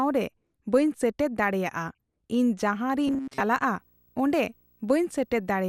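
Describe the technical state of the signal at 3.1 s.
At 3.1 s the speech turns into a rigid, metallic drone pitched at 134 Hz that only loosely tracks the syllables, from 3.08 to 3.40 s. This is robotic sound from repeated short buffers, likely caused by audio arriving too rarely. A snippet of about 7.5 ms is looped in place of most of the real signal, and that loop length fixes the pitch.

Underneath, from 2.72 s to the end, a video or display buzz adds a 59.94 Hz hum with hash above it and a faint whine near 15.7 kHz. It sits roughly 40 dB below the speech. A screen or video cable is coupling its field and line rates into the audio path.

The whole passage also sounds dull and gurgling, with granular distortion, plainly audible here. The likely cause is MP2 compression at 80 kbps, too few bits for MPEG Layer II's 32 sub-bands. High bands drop out and flicker, and the remaining bands are coarsely quantised.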